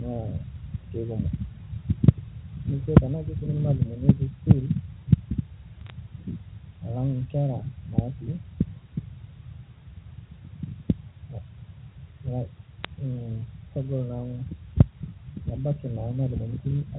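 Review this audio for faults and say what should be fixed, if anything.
Microphone overload at 2.96, 4.50 and 14.80 s: each peak is flattened for about 20 ms, heard as a harsh crackle on the loudest speech. The likely cause is input gain set so high that the peaks exceeded the converter's ceiling by about 11, 2 and 4 dB, cutting off the tops of roughly two fifths, one tenth and one fifth of the waveform. Lowering the microphone's input gain to leave several decibels of headroom would prevent this.

Microphone volume stepped down at 2.98 s: right after the worst overload, voice and background both drop by about 2 dB in one sudden step. This is likely the call software reacting to the clipped peak by cutting the device's input volume. Setting the correct input gain beforehand, or turning off automatic microphone adjustment, would avoid the abrupt level change.

Bit errors on a digital phone line at 5.86 to 5.90 s and at 12.84 s: brief bursts of sharp ticks and crackle sit over speech that is otherwise unchanged. 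Flipped bits in the G.711 mu-law stream, at a rate of a small fraction of a percent, each corrupt a single sample, and errors on the sign or high-order bits produce the loudest clicks. A cleaner transmission path with error checking on the line would prevent them.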